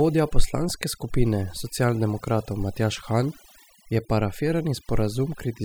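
A speech recording with overdone noise removal throughout: the background drops to near silence dotted with twinkling specks. Noise reduction set too strong pulls individual frequency bands down whenever they sit near its noise estimate, taking quieter parts of the voice with them.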